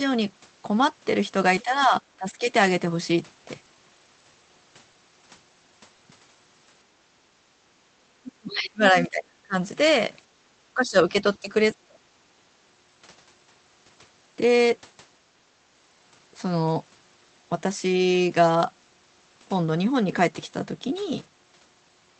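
Speech suppressed in double talk occurs at 1.63–1.93 s and 2.18–2.43 s, with the speech dipping by around 10 dB each time. The likely cause is both sides talking at once, so the echo canceller, unable to tell the near talker from loudspeaker echo, pulls the whole signal down.

Repeated packet loss (robotic sound) follows at 3.65–4.32 s. Four short gaps, the longest 20 ms, break the stream. About 60 ms is patched by stretching the preceding sound and about 40 ms is simply missing, leaving a choppy texture across roughly a tenth of that span.

At 8.25–8.32 s the other side's voice leaks through as a brief scrap about 20 dB below the main speech. This is likely loudspeaker sound that the echo canceller failed to subtract from the microphone signal.

Speech suppressed in double talk returns immediately at 8.39–9.55 s and is far deeper this time, around 30 dB, for roughly a second, so the speech nearly vanishes, likely while the far end is active.

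Background gated by the echo canceller comes at 10.31–10.46 s. The room tone drops by about 12 dB for roughly 100 ms as the canceller clamps the microphone during loudspeaker playback, then recovers.

Double-talk suppression hits twice more, at 10.74–11.52 s with a drop of around 15 dB and at 11.73–12.05 s with a drop of around 35 dB, the latter cutting the speech almost to silence. Throughout, the call path caps the audio at 8 kHz, which fits Opus running near 20 kbps.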